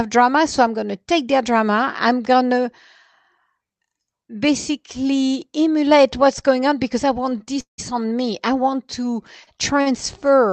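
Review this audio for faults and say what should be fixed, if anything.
The speech stutters from 7.29 to 7.80 s. These are repeated stalls. Packets arrived late, and the jitter buffer ran dry four times. The receiver extended the last sound each time, about 227 ms in all. The longest hold is 178 ms. Nearly half that span is filler. Nothing is lost, but the speech drags. A larger adaptive jitter buffer would prevent this.

Two short stalls from late packets follow, at 9.44 to 9.49 s and 9.81 to 9.88 s. In each, one packet was late and the buffer emptied briefly. The last sound was held for 29 ms, then 47 ms, before playback resumed. The result is a slightly stretched sound. Steadier network delay, or more buffer headroom, would prevent these.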